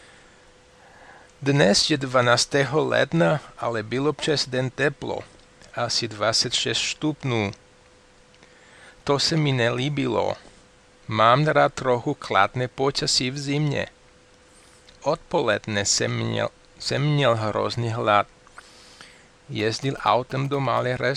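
From 19.59 to 20.79 s, GSM signalling bursts from a nearby phone, rectified in the audio path, gallop as short 217 Hz buzzes, unlike steady hum.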